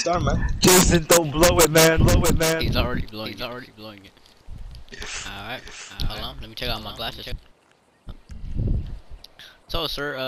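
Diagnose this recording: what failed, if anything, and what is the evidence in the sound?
A doubled audio track runs from 2.0 to 7.32 s: a second full-band copy trails by roughly 0.7 s, about 5 dB quieter, starting and stopping abruptly. The likely cause is a slower duplicate capture path. Unlike echo or reverb, it has no decay or room colour.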